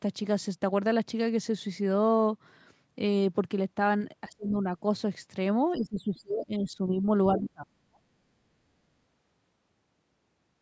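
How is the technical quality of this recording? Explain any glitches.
The recording has a recurring glitch: the speech is pulled down in three places, at 4.29 to 4.67 s, 5.77 to 6.94 s and 7.34 to 8.05 s. This is likely speech suppressed in double talk, where the echo canceller, confused by simultaneous far-end sound, ducks the talker. Drops reach about 25 dB, and about 40 dB in the last stretch. Unlike packet-loss dropouts, the sound sags and breaks up over spans of up to a second rather than snapping to silence. The call's microphone processing leaves nothing above 8 kHz.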